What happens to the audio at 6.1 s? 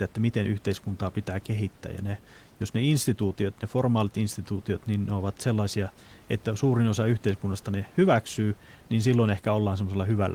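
Nothing goes wrong at 6.1 s; the speech carries on intact through that moment, with only the faint room noise of the recording space sitting about 30 dB beneath it.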